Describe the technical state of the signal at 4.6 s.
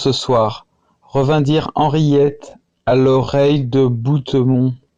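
At 4.6 s you're inside a time-stretched section that starts at about 1.98 s and runs to the end of the clip. The speech is playing at roughly 0.71 times its normal pace with the pitch unchanged, most likely because software lengthened it by repeating short slices rather than resampling. That's why the pace drops abruptly at the boundary and everything past it drags.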